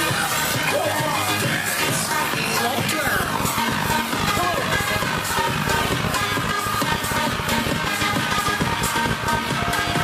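From 3.07 s to 10.02 s, a train of clicks runs over the audio. Around a hundred similar pulses arrive at about 13.4 per second, unevenly spaced. They peak about 10 dB above the sound. They are likely interference or a faulty connection or power supply, heard as irregular ticking.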